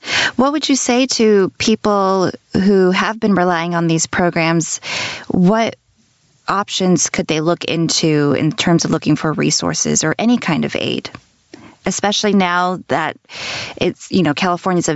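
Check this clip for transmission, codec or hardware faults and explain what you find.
Two faults run through the whole speech clip: gain pumping and Bluetooth LC3 compression.

Gain pumping is present from start to finish. The gain swings by around 20 dB, so loud and soft passages sit squashed together. The likely cause is microphone gain set far too high, with a fast limiter clamping it on each peak. On the waveform, peaks look flattened to one level.

Bluetooth LC3 compression also affects the entire clip. The codec damage is plainly audible: speech carries a breathy, grainy edge because much of the upper spectrum has been discarded and refilled with noise. On a spectrogram, the upper band up to the call path's 8 kHz limit looks smeared and blocky, with a coarse frame-by-frame texture. That pattern points to a likely LC3 stream around 48 kbps using 10 ms frames.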